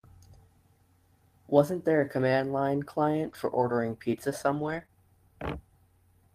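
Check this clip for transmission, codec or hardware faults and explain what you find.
Two kinds of network fault turn up in this speech, most of them in the second half.

Lost packet rebuilt from error correction occurs at 2.19–2.21 s, 3.25–3.35 s and 4.55–4.81 s, rebuilding 20 ms, 60 ms and 140 ms respectively. The lengths fit one, three and seven lost 20 ms packets. Each missing stretch was replaced by the low-bitrate backup copy carried in the following packet, so nothing drops out. Instead those moments turn briefly rougher and grainier. On a spectrogram the harmonics blur and the noise floor rises inside each patch. The waveform shows no gap.

Short concealed packet loss follows immediately at 4.83–4.86 s and 4.86–4.90 s, each replacing about 20 ms that arrived too late. The decoder extrapolated from the preceding sound to fill the holes, then crossfaded back into real audio. This is heard as a quick smear or wobble just after the longer rebuilt stretch. 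A spectrogram shows smeared, repeated texture there, and the waveform shows a short extrapolated segment.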